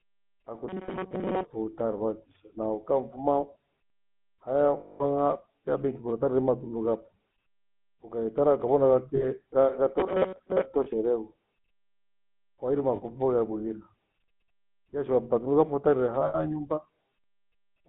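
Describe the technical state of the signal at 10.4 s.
At 10.4 s the sound sits inside a burst of robotic sound from repeated short buffers, running from 10.00 to 10.66 s. A fixed 188 Hz metallic buzz is imposed on the speech, which fits a loop of about 5.3 ms being replayed, with most of the real audio in that span skipped. The likely cause is audio arriving too seldom, so the last fragment is repeated to fill the gap. Unlike a dropout, nothing goes silent, and unlike codec roughness, the buzz stays rigidly fixed.

Underneath, the GSM full-rate codec damage present throughout also applies here: a 13 kbps stream confined to a 150 Hz to 3.5 kHz line band, with plainly audible buzzy, gravelly roughness from the pulse-driven vocal tract model. That coarseness follows the speech's own pitch and persists across the whole clip, which separates it from the brief, fixed-frequency buzz of the repeated buffers.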